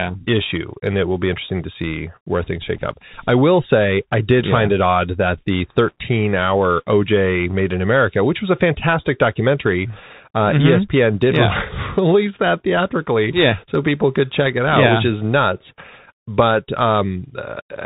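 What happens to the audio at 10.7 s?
At 10.7 s the speech is muffled and narrow, with scratchy s sounds, a grainy hiss beneath it and harsh distortion on loud bright sounds. This is the Bluetooth CVSD headset codec, present throughout: one-bit up/down steps cannot track fast changes, and nothing above 4 kHz passes.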